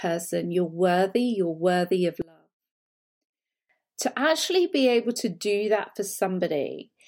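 From 2.22 s to 3.69 s the speech drops by about 28 dB, leaving only a low residue before the level returns at 3.69 s. The likely cause is one channel inverted: one side of a stereo source had its polarity reversed for that stretch, so when the two sides were summed to mono, the material common to both cancelled and only the small difference between them remained.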